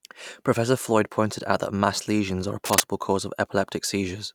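A short speech clip with one burst of cable scratch noise, from 2.65 to 2.80 s. For about 150 ms a dense, ragged scratching rides over the speech, somewhat louder than the speech itself. The likely cause is a worn cable or connector being moved, its contact resistance flickering. The irregular, gritty texture sets it apart from a digital click, which is a single sharp tick, and from handling noise, which sounds more like a low thump.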